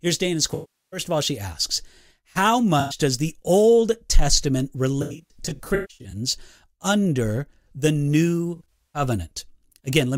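AAC frame loss with concealment hits this speech clip four times: 0.54 to 1.00 s, ending just before "of all she asks"; 2.80 to 2.98 s, between "all she asks how" and "does the"; and in scattered bursts over 5.02 to 6.16 s and 8.56 to 9.02 s, with the longest runs around 150 ms. Missing AAC frames are patched from the last good spectrum, so short gaps become a smeared, noisy or phasey stretch rather than clean sound, and a long enough loss decays to a faint noise floor before fading back in.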